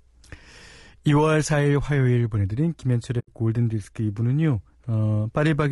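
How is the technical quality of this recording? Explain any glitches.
The technical quality is compromised by coding damage throughout and one dropout.

Throughout, the speech sounds rough and grainy, with noise filling the gaps between harmonics and a thin, synthetic-sounding top band. This is likely low-delay AAC compression (AAC-ELD) at a low bitrate, probably around 32 kbps. Its short frames capture pitch harmonics poorly.

From 3.19 to 3.29 s, the sound fades out and back in, leaving a soft-edged hole of about 0.1 s. This is AAC frame loss with muting, which fits roughly four lost frames. The decoder zeroed their spectrum, and the overlapping windows smoothed the edges. Its gentle fades distinguish it from a hard dropout, which would click.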